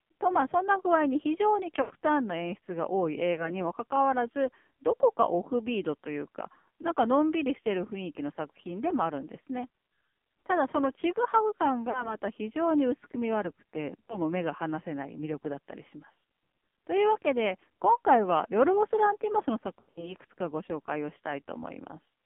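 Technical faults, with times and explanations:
Throughout: AMR narrowband mobile codec. The speech sounds heavily buzzy and synthetic, confined to about 150 Hz to 3.4 kHz. A vocal-tract model driven by sparse pulses, at a low rate that fits 5.9 kbps, rebuilds the voice and discards everything above 4 kHz.
1.82–1.91 s, 3.34–3.63 s, 11.90–12.16 s, 14.06–14.18 s, 19.80–20.14 s: lost AMR speech frames. Brief dips and warbles, smeared and fading at 19.8 s, where 140 ms is missing over 160 ms. Elsewhere 80, 20, 40 and 20 ms are missing, and the decoder repeats its last good settings with falling gain.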